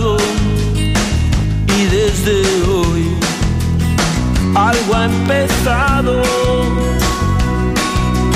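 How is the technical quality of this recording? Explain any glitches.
The recording carries a continuous fault: word clock ticks from 0.18 s to 8.31 s. The receiving device's clock is not locked to the source's and runs roughly 150 ppm off, so about every 0.15 s a sample is dropped or repeated. Around fifty sharp, uneven ticks result.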